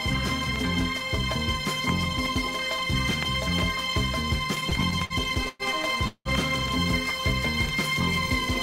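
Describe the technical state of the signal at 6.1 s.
From 6.07 to 6.28 s the last sound smears into a fading buzz, briefly silent, then resumes intact: a call audio freeze, likely from delayed packets emptying the jitter buffer.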